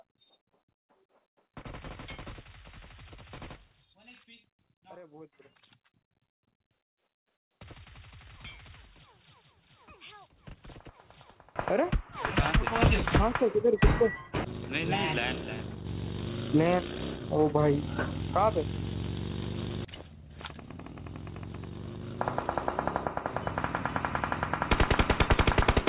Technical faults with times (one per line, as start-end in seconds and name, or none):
0.00-11.56 one channel inverted